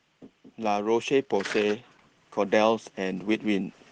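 From 0.55 to 3.73 s, automatic gain rising lifts the speech and background together by about 5 dB, a slow swell rather than the sudden jump of a manual level change.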